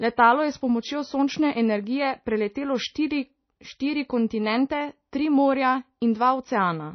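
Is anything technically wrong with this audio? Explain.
Yes. Throughout, the speech shows plainly audible MP3 compression damage, likely from a bit-starved encode that fits about 24 kbps. The treble is cut off at 6.1 kHz, and weak frequency lines flicker between frames, leaving a watery, swirly texture.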